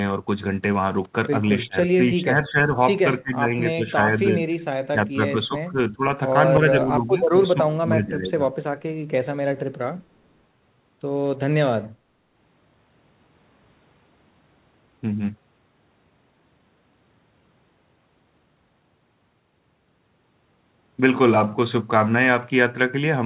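An echo canceller most likely could not separate the near talker from its own loudspeaker echo while the far end was talking, and turned both down: speech suppressed in double talk. The voice sinks by roughly 10 to 20 dB at 1.66, 1.96 to 2.78, 3.22 to 3.53, 3.74 to 4.45, 4.92 to 6.02 and 6.59 to 8.51 s, dipping and breaking into pieces. All of it sits within a band that stops near 4 kHz, which fits a G.711 call path.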